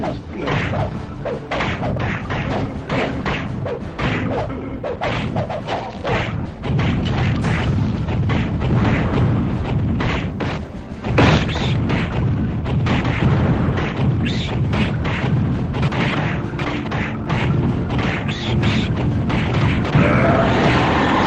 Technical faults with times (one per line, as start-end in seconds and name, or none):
6.45-6.56 skip ahead
7.10-8.22 jitter buffer speed-up
10.37-10.96 jitter buffer speed-up